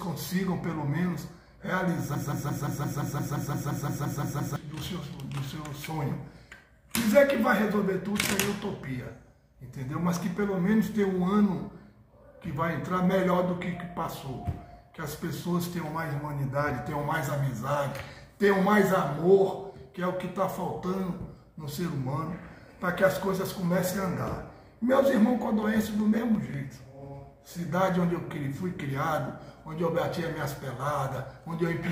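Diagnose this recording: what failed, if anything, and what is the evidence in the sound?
From 2.15 to 4.56 s a broken-record loop holds the sound. A 173 ms fragment repeats exactly, back to back, 14 times. Whatever should have played across those 2.4 seconds is gone. The identical repeats point to the playback or buffer stage. The likely cause is a stalled player or stream that kept resending the last block it held instead of waiting for fresh data.

Between 25.63 and 26.55 s there is a train of clicks: about seven sharp pulses at a regular 5.47 per second. They peak about 5 dB above the surrounding sound and share much the same shape. Their even spacing and consistent form point to a periodic external source rather than damaged audio data. The likely cause is interference coupling into the analogue wiring from nearby equipment.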